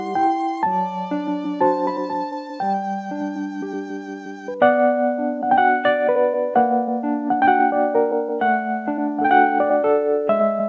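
No technical faults can be heard in this audio; it carries the ordinary coding texture of a call path, with nothing above 8 kHz, which fits a wideband codec such as G.722.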